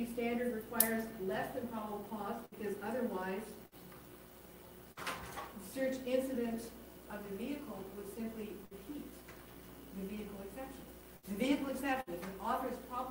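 Between 2.45 and 5.07 s the audio shows scattered short gaps: about four small holes, the longest around 70 ms, each patched by continuing the preceding sound. These register as isolated ticks, smears or hiccups spread across the stretch rather than one audible dropout. At 8.65, 11.17 and 12.01 s there is instead a burst of packet loss each time, with roughly 60 ms missing and filled by a held, fading extension of the last sound, heard as a brief buzz or hiss. The audio then resumes with that section skipped, a single concentrated gap, unlike the dispersed glitches earlier.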